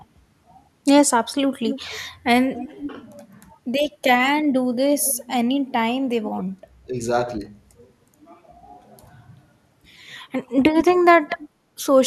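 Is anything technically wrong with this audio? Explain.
Yes. The speech has two recurring problems.

Echo leak appears at 1.67 to 2.0 s, 2.55 to 2.87 s, 5.05 to 5.14 s and 10.77 to 11.49 s. A delayed copy of the voice trails behind it, about 250 ms late, then about 210 ms at the end. It sits roughly 10 to 20 dB below the speech. The likely cause is a loudspeaker at the far end whose echo canceller let part of the signal back through.

Speech suppressed in double talk occurs at 2.51 to 2.81 s, 4.99 to 5.05 s and 11.65 to 11.7 s. The voice dips briefly, by about 10 dB and by about 20 dB at the last one. Each dip lasts a fraction of a second. This likely happens because the canceller confuses overlapping talk with echo and turns both down.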